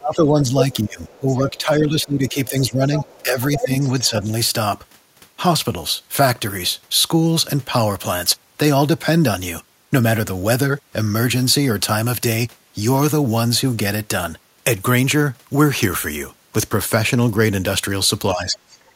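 From 0.0 to 4.29 s the echo canceller, likely confused by both sides talking at once, pulls the talker down with the loudspeaker echo, so the speech dips by roughly 15 dB at its deepest across about three seconds. This is speech suppressed in double talk. Within that stretch, the other side's voice leaking through is likely residual echo the canceller failed to remove: a faint scrap at 1.11 to 1.17 s, about 30 dB down; a strong, nearly speech-level stretch from 2.95 to 3.68 s, about 5 dB down; and a quieter stretch from 4.0 to 4.22 s, about 20 dB down. At 18.34 to 18.57 s the speech again likely drops under double talk, by about 10 dB. From 18.69 to 18.92 s a faint trace of the other side, about 30 dB down, likely leaks through once more.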